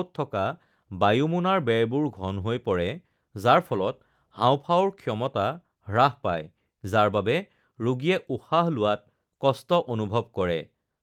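A speech recording with no audible technical faults at any point in the signal.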